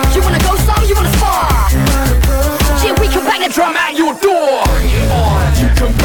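From 0 to 3.46 s the audio runs as a section at the wrong speed, about 1.22 times too fast, likely from a clock mismatch. Pitch rises about three semitones along with the tempo, unlike a pitch shift, which leaves timing unchanged.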